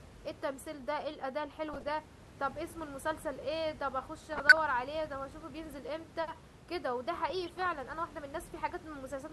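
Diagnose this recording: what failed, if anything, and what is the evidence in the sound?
The failure is DAB burbling, at the reception and MP2 decoding stage. Bursts of burbling break through the speech from 1.69 to 1.90 s, 4.33 to 4.59 s and 7.30 to 7.66 s. Weak reception let a small fraction of a percent of bits slip past error correction. Corrupted samples then put short blips of noise into single sub-bands. The steady room noise, about 16 dB below the speech, is part of the recording.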